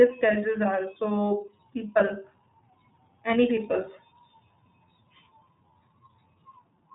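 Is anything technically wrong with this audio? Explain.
Yes. Throughout the speech the sound is narrow and slightly rough, with a synthetic edge that is plainly audible, and nothing passes above 3.8 kHz. This is iLBC codec damage. The codec rebuilds each short block of excitation on its own, without drawing on the block before, so the voice loses its smoothness from one stretch to the next. The character fits 30 ms frames at a rate of about 13.3 kbps, the lower of iLBC's two modes.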